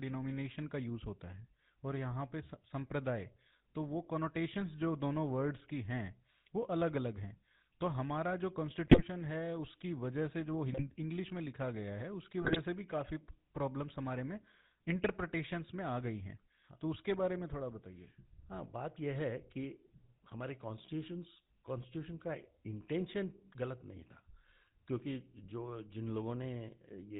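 A buzzy, gravelly roughness runs through the whole speech clip, with nothing above 4 kHz: GSM full-rate codec damage, consistent with a 13 kbps pulse-excited vocal-tract model. From 8.86 to 9.03 s, 10.72 to 10.95 s and 12.42 to 12.58 s the speech breaks into squawks, pops and gargling. These are GSM bit errors: corrupted filter, pitch or gain values distort the spectrum and level frame by frame.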